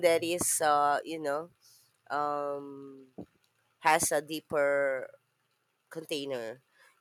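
Microphone volume stepped down at 1.02 s: the speech and the background both fall in level at once by about 2 dB, most likely because the call software judged the input too hot and cut the device's input volume in a single step.

Microphone overload from 3.86 to 3.95 s: the loudest peaks flatten and gain a harsh, crackling edge, overshooting the converter's ceiling by about 4 dB. A small share of samples are clipped, likely because the input volume was set too high.

Microphone volume stepped down again at 4.29 s, shortly after that distorted burst: the level drops abruptly by about 1 dB, a smaller second cut in the input volume.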